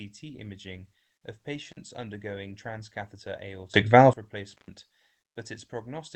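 At 1.71 to 1.77 s, between "imaging of" and "undergoing transcatheter", an intermittent contact opens the line for about 40 ms, briefly dropping the speech as a loose plug or cable connection breaks. Just after "undergoing transcatheter", from 3.74 to 4.13 s, a sudden gain jump raises speech and background noise together by about 20 dB, likely from a digital gain change applied without a ramp. At 4.53 to 4.68 s a second intermittent contact opens the line for about 118 ms, and the sound drops out again. Throughout, the audio carries the coding noise of a call codec path, with content above 8 kHz cut off, which fits Opus at 24 kbps.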